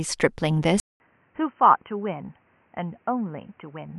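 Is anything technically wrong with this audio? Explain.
Yes. At 0.8 s the speech breaks off for 200 ms and returns duller and boxy, about 10 dB quieter, with nothing above 3.1 kHz and a new, faint noise floor. This is most likely the input switched to a poorer device, with a narrower band than the original microphone.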